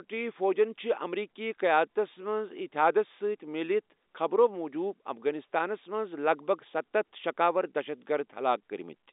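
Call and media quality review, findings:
No call or media quality findings; the speech sits within the narrow G.711 telephone band, as expected for the line.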